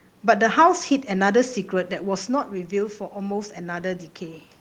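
Automatic gain rising runs from 1.71 to 4.51 s. Around 2 s the talker moves and the level at the microphone drops by about 9 dB. The gain control responds by slowly lifting its gain about 4 dB, so speech and room noise swell together.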